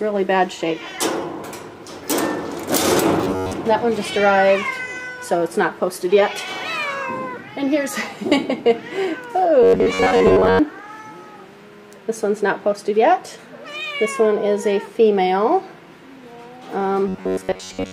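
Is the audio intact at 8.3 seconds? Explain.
Yes, at 8.3 seconds the audio is intact, with no dropout, click, distortion or other fault to be heard at that moment.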